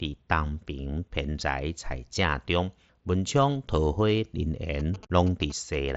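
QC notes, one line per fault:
4.80–5.90 s, GSM signalling bursts: there's a galloping dit-dit-dit run of short buzzes at 217 Hz, sitting roughly 20 dB under the speech. A 2G phone close by is signalling to the network in short groups of radio bursts rather than transmitting continuously, and something in the audio path is rectifying that RF into the 217 Hz frame rate, so you hear the bursts as brief buzzes.
5.07–5.10 s, unconcealed Bluetooth headset packet loss: a 30 ms hole with hard edges sits right inside that GSM burst stretch. The headset link lost a short run of voice packets, which fits about four missing packets, and nothing papered over the gap. The mSBC wideband link carried the audio around it.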